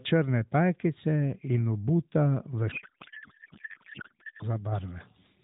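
From 2.72 s to 4.46 s the speech turns into garbled noise and warble that barely tracks it, a codec payload misread: octet-aligned AMR frames were being read as bandwidth-efficient, so every field landed in the wrong place. Around it the AMR narrowband codec, which fits 12.2 kbps, sounds lightly band-limited.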